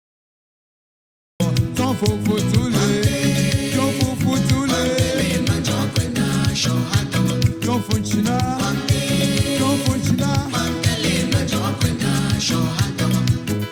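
The audio opens with a cut-off start: digital silence runs from 0 to 1.40 s, then sound appears abruptly at 1.40 s already mid-event, with no natural attack or fade-in. Capture or streaming began late, after the sound was already underway.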